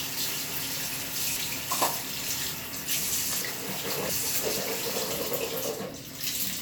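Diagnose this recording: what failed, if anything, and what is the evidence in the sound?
Chunks out of order at the buffer stage. At 1.02 to 1.71 s, one 0.34 s block plays one slot late. At 3.41 to 4.44 s, a block plays two slots late. Both spots sound jumbled, though no audio is missing.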